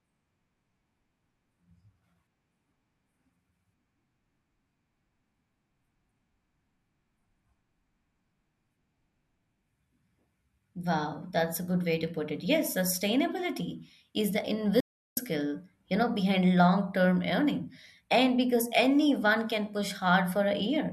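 At 14.80 s the player likely ran out of data, a playback stall: the speech cuts to silence for about 370 ms, then resumes at 15.17 s.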